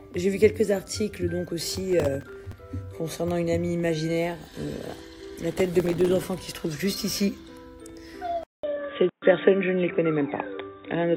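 Processor overload crackle appears from 1.70 to 2.53 s and again from 5.52 to 6.24 s: dozens of buffers, each a few milliseconds long, miss their deadline and are filled with repeated old audio, producing a gritty tearing.

At 8.43 s a 200 ms silence is followed by dull sound with nothing above 3.8 kHz, a slight level shift and a faint new hiss to the end, likely an input switched to a poorer device.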